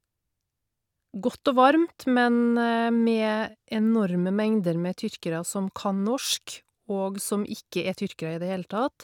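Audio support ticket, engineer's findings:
Engineer's findings: no audio fault found on this ticket's speech clip.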